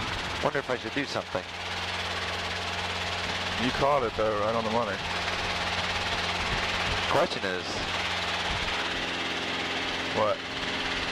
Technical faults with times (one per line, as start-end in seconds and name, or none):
3.74-3.78 chunks out of order